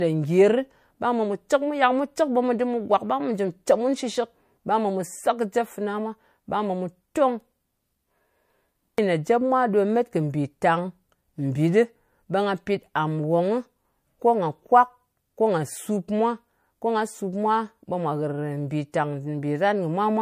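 Right near the end, at about 18.92 s, there's a bit of pre-echo. A sharp onset in the speech lands late in a transform block, and the quantisation noise meant for that loud part gets spread back over the quiet stretch before it. You hear it as a short hiss, roughly 18 ms long and about 12 dB up, just ahead of the attack, which comes across softened. That fits a block of about 36 ms, with no switch to short blocks.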